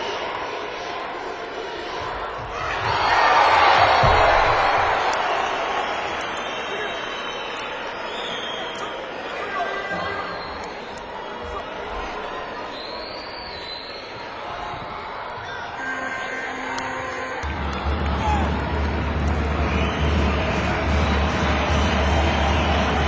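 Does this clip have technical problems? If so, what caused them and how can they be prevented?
Yes. Throughout the clip there is a steady 20 Hz tick-buzz, present only while sound plays, from a resampler restarted on every block. Each 50 ms block was converted separately, likely from 44.1 kHz to 16 kHz, so every edge lacks true neighbouring samples and carries a small error. A spectrogram shows faint vertical lines every 50 ms, and the waveform shows tiny steps at each boundary. To prevent it, keep one continuous resampler whose filter state carries across blocks.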